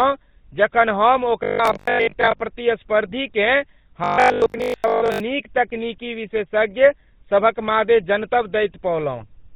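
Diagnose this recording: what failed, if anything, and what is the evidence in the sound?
The codec stage is at fault throughout: the speech carries the buzzy, gravelly roughness of the GSM full-rate codec, with nothing above 4 kHz. This is consistent with 13 kbps full-rate coding, which rebuilds the voice from a vocal-tract filter driven by coarse pulse excitation.

From 1.43 to 2.41 s and again from 4.04 to 5.22 s the speech turns into a rigid metallic buzz at 50 Hz. This is robotic sound from repeated short buffers, likely a buffering fault: 20 ms blocks replayed while most of the real audio is skipped.

At 3.44 to 3.50 s and at 9.19 to 9.24 s there are brief squawks and gargling pops. These are GSM bit errors on the radio link. Corrupted filter, pitch or gain parameters distort the decoded frames, with the second burst the harsher of the two.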